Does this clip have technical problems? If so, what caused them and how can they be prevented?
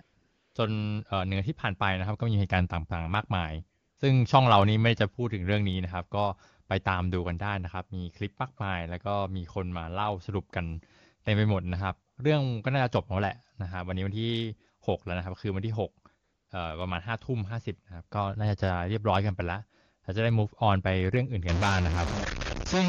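Yes. There's AMR comfort noise at 0.01 to 0.55 s, 3.79 to 3.97 s, 12.11 to 12.17 s and 16.23 to 16.49 s. The phone decided nobody was talking, stopped sending speech frames, and the far end filled those gaps with smooth synthetic noise built from a rough level-and-spectrum sketch, so the real background drops out and in. You can avoid it by turning off discontinuous transmission or by recording straight from the source instead of over the call.

From 21.49 s to the end there's distortion, and the quiet stretches fill with hiss. That's likely a stuck bit: one data bit is held at 0 or 1 by a broken line or converter, so about half the samples get pushed off by that bit's weight. The fix is to check the cabling and swap out the faulty converter or interface.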